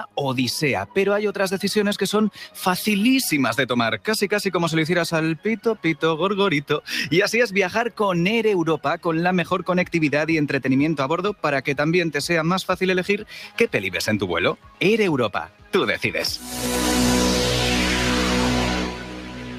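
A speech-style noise suppressor stays active for the whole clip, even though the material is not speech. It treats steady tones, ambience and decaying tails as noise. It pulls them down while sharper onsets pass. The resulting gain moves by roughly 10 dB. Held sound therefore breathes and pumps. Tails thin out early and never ring naturally.

The suppressor cuts specific sounds harder at four points. From 5.58 to 5.84 s, the sound sinks by about 11 dB for a short stretch. From 14.54 to 14.81 s and again from 15.47 to 15.74 s, the drop reaches about 12 dB, each lasting a few tenths of a second. The last cut runs from 18.87 s to the end, also about 12 dB deep. Each time, the affected sound sinks in level.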